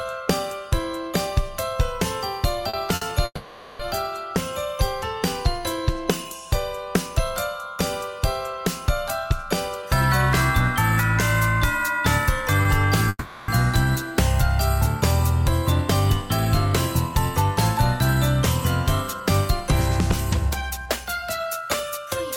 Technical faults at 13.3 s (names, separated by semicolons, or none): call audio freeze